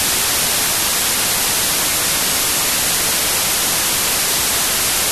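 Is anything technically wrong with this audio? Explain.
Yes. A wrong sample width runs throughout. Packed 24-bit samples are read as 16-bit, which garbles the bytes. The speech sits buried in loud noise, slowed to about two-thirds speed and lower in pitch.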